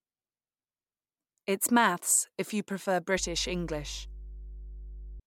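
From 3.17 s to 5.20 s, mains hum enters: a steady 50 Hz tone sitting roughly 15 dB below the speech, from power-line energy leaking into the signal path. Its fixed, unwavering pitch separates it from wind or handling rumble, which wander unpredictably.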